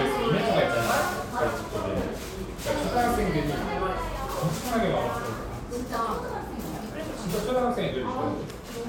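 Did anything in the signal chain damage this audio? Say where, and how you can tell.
Yes. Drift correction steps at 0.39–1.48 s and 5.51–7.92 s: sound runs 6% fast, about a semitone sharp, then snaps back, likely buffer clock-matching.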